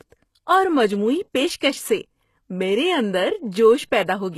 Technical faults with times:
0.00-4.38 HE-AAC compression

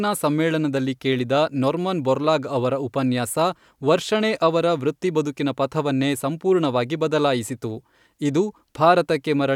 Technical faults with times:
none

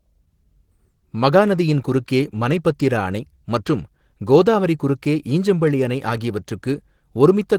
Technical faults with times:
0.00-7.58 Opus voice compression

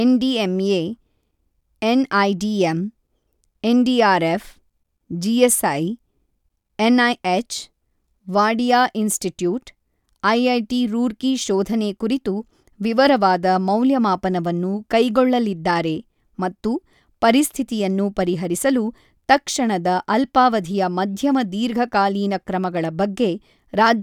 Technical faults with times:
none

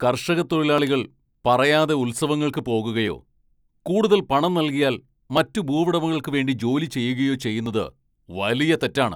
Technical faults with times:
0.78-7.66 clock drift buffer slips

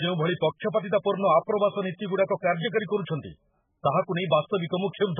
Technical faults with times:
0.00-5.20 MP3 compression

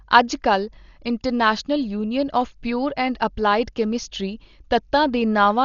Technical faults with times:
0.00-5.64 Dolby Digital compression

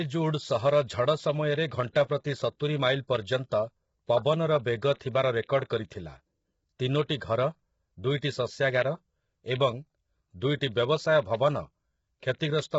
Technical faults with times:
0.00-12.79 low-delay AAC compression

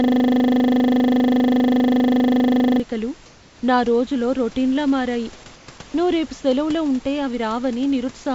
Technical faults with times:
0.00-2.80 system hang loop
5.56-5.68 comfort noise in place of the background

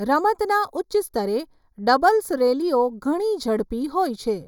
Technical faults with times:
0.00-4.48 channel delay (comb filtering)

